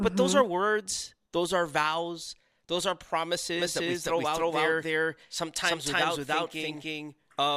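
From 3.60 s to the end, the speech has a doubled audio track: a second, equally loud copy trails by roughly 300 ms, likely from a slower capture path. Unlike an echo or reverb, it never decays or repeats and begins abruptly.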